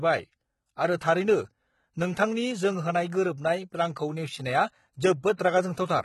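Throughout the speech, the encoder has likely discarded the upper spectrum and rebuilt it by spectral band replication, as HE-AAC compression does. The damage is heavy, which fits a bitrate around 16 kbps: s sounds come out gritty and lispy, with bright but misaligned treble.

From 5.37 to 5.39 s, pre-echo appears. The codec spread quantisation noise across a block in which a sharp attack arrives late, so about 24 ms of hiss leads into the onset, and the attack itself sounds smeared and soft.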